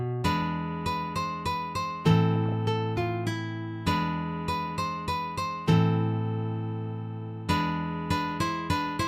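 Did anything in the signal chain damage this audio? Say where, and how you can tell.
Yes. DAB burbling appears between 2.35 and 2.54 s, at the codec stage. Short noise blips sit in single sub-bands over the audio. Weak reception let bit errors through error correction, corrupting samples. That burst fits roughly ten damaged frames.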